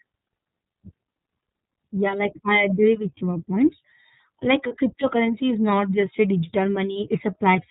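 The whole clip passes through the iLBC codec. It is a narrowband codec, so nothing above 4 kHz survives. The damage is plainly audible. The speech sounds muffled, a little rough and synthetic. The 30 ms framing fits the 13.33 kbps mode.

At 4.67 s, and again at 6.93 s, there are lost iLBC frames. Each gap fits a single missing 30 ms frame. The decoder fills it by repeating the last pitch cycle mixed with noise. It sounds like a brief, held, buzzy vowel. Normal speech returns almost at once, because each frame decodes on its own.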